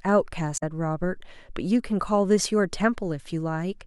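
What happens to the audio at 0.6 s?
Right around there, from about 0.54 to 0.63 s, the speech gets hit by damaged data in a compressed stream. For roughly a tenth of a second some of the coded bytes are wrong, so the decoder misreads those frames, loses its sync and hunts for the next valid frame header before it can carry on. What you hear is a chirp, squawk, click or short hole cutting into the speech instead of clean audio.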